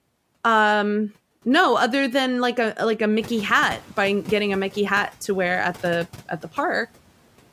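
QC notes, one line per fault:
3.21–3.81 s, noise suppressor catching up: after room noise jumps about 14 dB around 3 s, it passes with only about 4 dB of reduction, then fades over 0.6 s as the noise estimate adapts, before "by getting a". A smooth fade, not an abrupt cut, distinguishes it from gating.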